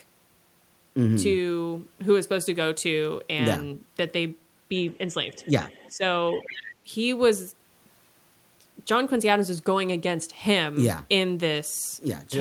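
Speech suppressed in double talk affects the speech at 4.98 to 5.18 s, 5.89 to 6.04 s and 6.85 to 6.93 s. The level dips briefly, by a few decibels at first and by about 10 dB later. This likely comes from an echo canceller that turned down the near talker while the far side spoke at the same time. The other side's voice leaking through appears at 5.33 to 5.49 s and 5.69 to 5.92 s as faint scraps about 30 dB below the speech, then more plainly at 6.32 to 6.73 s at about 15 dB below. This is likely loudspeaker echo that the canceller left in the microphone signal.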